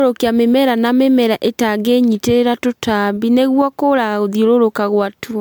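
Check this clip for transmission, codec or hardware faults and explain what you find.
There's one fault, and it runs through the whole speech clip: generation loss. The sound has a swirly, hollow smear and blurred consonant attacks, more than a single MP3 pass at the rate it suggests, around 136 kbit/s, would give. The likely cause is repeated decoding and re-encoding, roughly seven times over, with each pass requantising on a shifted frame grid so the noise and spectral holes pile up. Content tops out near 20.1 kHz.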